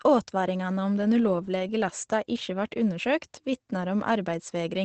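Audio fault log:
Throughout, Opus voice compression: the speech has a muffled, slightly hoarse and faintly robotic edge, and nothing survives above 9 kHz. That fits Opus at around 12 kbps in its SILK mode. SILK models the voice with linear prediction, trims the band to wideband, and only has enough bits for a rough sketch of the excitation underneath. The coarse excitation gives the buzzy, roughened quality, and the missing top end takes away the air and crispness.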